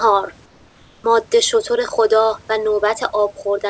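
From 0.46 s to 1.04 s, roughly 0.58 s, the room background drops out and is replaced by comfort noise: a steady, featureless hiss about 3 dB quieter than the real background, which sits about 33 dB below the loud parts of the speech. The likely cause is discontinuous transmission. The sender's voice detector judged the pause silent and stopped sending, and the receiver synthesised smoothed noise until speech resumed. Throughout the clip, the G.722 call path leaves no content above 8 kHz.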